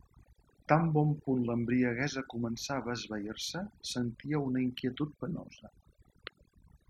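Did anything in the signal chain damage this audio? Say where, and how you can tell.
Yes: overdone noise removal in the processing stage, throughout. Bins gated to silence leave twinkling residue; a spectrogram shows speckled holes between harmonics.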